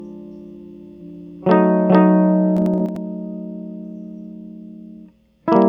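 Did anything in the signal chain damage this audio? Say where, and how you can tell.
Yes. From the start of the music to 2.86 s there is a doubled audio track. A second full-band copy runs roughly 400 ms behind and about as loud as the original, with no decay or room colouring. It then cuts off abruptly at 2.86 s. On a spectrogram every onset appears twice at a fixed spacing, and the waveform shows paired transients until the sudden stop. The likely stage is an edit or a second capture path mixing two out-of-step copies.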